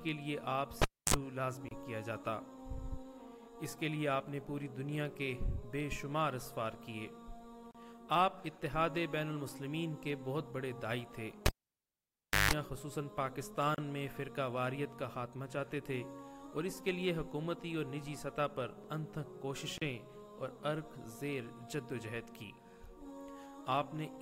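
The audio has two technical faults. The first is a cable pulled and plugged in, heard twice. At 0.82 s a pop cuts the sound to near silence for about 274 ms. A 47 ms burst of 50 Hz mains buzz follows as the plug's tip makes contact, then another pop as the sound returns at 1.14 s. The same thing happens from 11.46 to 12.51 s, with the dropout lasting about 1.0 s and the buzz 158 ms. Each time, the live connection breaks and remakes. The second fault is a gap at a join of encoded pieces, repeating every 6.0 s. Short silences open at 1.69 s (27 ms), 7.71 s, 13.75 s and 19.78 s (34 ms each). Their edges are smeared by the codec, and the sound resumes where it stopped. This points to segments encoded separately and joined without trimming each encoder's start delay and final-frame padding.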